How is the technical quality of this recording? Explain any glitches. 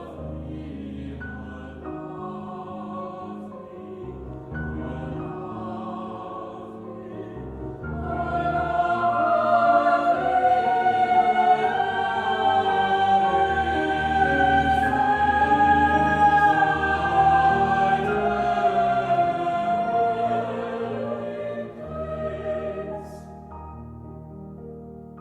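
Nothing here stands out as a glitch; the recording holds together without any technical faults to point to.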